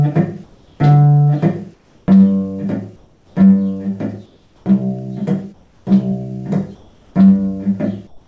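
Comfort noise replaces the background at 0.44–0.80, 1.74–2.08, 2.96–3.36, 4.26–4.66, 5.54–5.86, 6.75–7.15 and 8.07–8.27 s: the sender likely stopped transmitting in pauses, and the receiver filled them with steady, featureless hiss about 3 to 5 dB quieter. A spectrogram shows smooth, detail-free noise bands there, and the waveform shows flat, slightly lower noise floors. Throughout, nothing appears above 8 kHz, which fits a G.722 call path.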